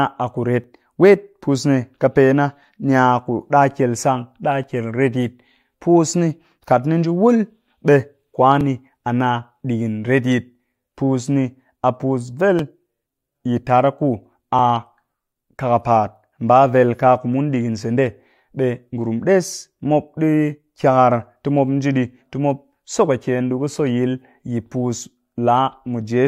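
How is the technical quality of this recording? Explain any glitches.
Not great. The speech has a small, regular glitch. At 0.64, 2.64, 4.64, 6.63, 8.61, 10.6, 12.59 and 14.59 s there's an overlap between stream segments, repeating every 2 s. Neighbouring segments claim overlapping time, so the player trims a few milliseconds of audio that wasn't duplicated. The waveform jumps and you hear a tiny click or skip each time.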